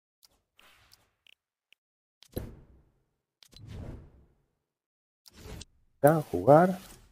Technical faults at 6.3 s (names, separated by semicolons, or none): none